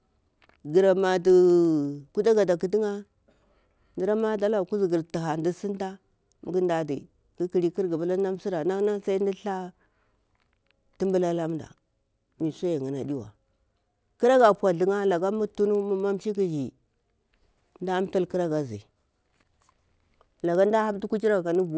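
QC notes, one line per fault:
throughout, resampler restarted on every block: a steady 20 Hz buzzy ticking rides under the speech and vanishes in pauses. Each 50 ms block was converted separately, leaving a small error at every block edge; the conversion fits 24 kHz to 16 kHz.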